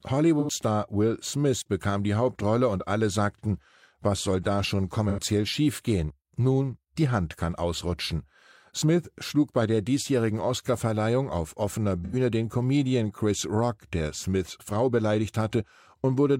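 AAC frame loss with concealment hits at 0.39, 5.08 and 12.04 s. Each 85 ms gap is rebuilt from the last good spectrum. It sounds smeared, noisy or phasey.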